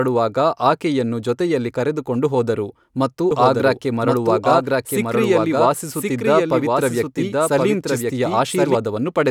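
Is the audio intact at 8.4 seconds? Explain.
No. At 8.4 seconds the speech is overlaid by a second, somewhat quieter copy of itself running about a second behind, with no reverb or room colour. This doubled audio track begins abruptly at 3.31 s, just after "ಜೊತೆಯಲ್ಲಿ ಕರೆದುಕೊಂಡು ಹೋದರು ಮತ್ತು", and cuts off at 8.75 s. It likely comes from the same signal being captured again through a slower path, or an edit leaving two copies out of step.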